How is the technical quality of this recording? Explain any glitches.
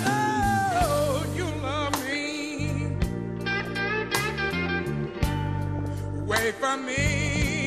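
The technical quality is poor. Low-rate compression damage runs throughout, and four bursts of reception errors break up the sound.

MP2 compression is audible from start to finish. The top end sounds dull and the sound has a granular, gurgling texture. This is likely MPEG Layer II coding starved of bits, dropping upper sub-bands and quantising the rest coarsely. It fits a rate near 80 kbps.

DAB burbling occurs at 1.88–2.57 s, 3.51–3.80 s, 5.67–5.86 s and 7.24–7.44 s. Bit errors, a small fraction of a percent, slip past error correction into the MP2 data. Corrupted samples put short blips of noise into single sub-bands, and corrupted scale factors make sub-bands jump in level for up to a frame. The result is short noisy blips and sudden level jumps in parts of the spectrum.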